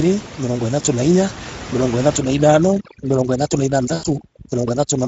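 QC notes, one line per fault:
throughout: Speex codec. Too few bits go to the excitation, leaving speech plainly hoarse and noisy; the damage fits a mid-rate mode near 16.8 kbps.
2.17–5.08 s: overdone noise removal. An over-strong suppressor mutes bands near its noise estimate, so the room noise, about 14 dB below speech, collapses into twinkling near-silence.
3.93–4.04 s: VoIP packet loss concealed by the speech codec. The decoder extrapolates its last pitch and filter with falling gain across the 100 ms gap, giving a fading buzzy tone or coloured noise. The gap fits five lost 20 ms frames.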